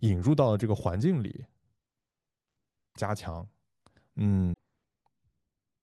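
Damaged data in a compressed stream interrupts this speech at 0.60–0.62, 2.92–2.97 and 4.50–4.58 s. Each time, corrupted bytes make the decoder misread frames and lose sync, leaving a brief chirp or blip.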